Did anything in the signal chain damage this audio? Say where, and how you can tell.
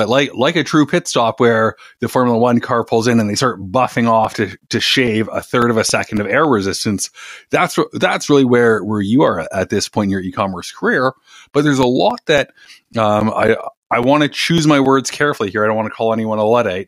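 Yes, at the storage and playback stage: CD scratch ticks. Two runs, 3.42 to 7.0 s and 11.83 to 15.4 s, each carry 14 evenly spaced ticks, about four a second, of uneven strength. Once per disc revolution, a blemish corrupts more data than error correction can rebuild, so the player conceals those samples. A spectrogram shows thin, regularly spaced broadband vertical lines. The waveform shows brief flattened gaps of a few milliseconds, the longest around 10 ms.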